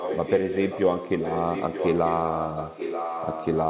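From 0 to 0.83 s and again from 1.19 to 3.58 s, an echo leak lays a second copy of the speech 935 ms behind the first, only slightly quieter. The likely cause is a loudspeaker whose echo canceller let its microphone pickup return.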